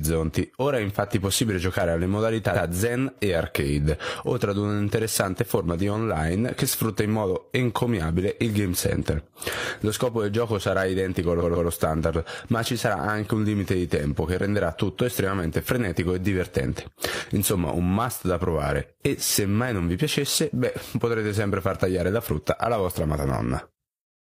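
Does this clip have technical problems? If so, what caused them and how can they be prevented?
Yes. There are repeated frames. At 2.51 s a block of about 93 ms plays twice, causing a brief stutter. From 11.38 s to 11.66 s a 139 ms block plays three times. The same compressed data was written or sent again, so the decoder replays it and the audio runs longer. To prevent this, make sure the writing or streaming path never writes or sends the same frame more than once.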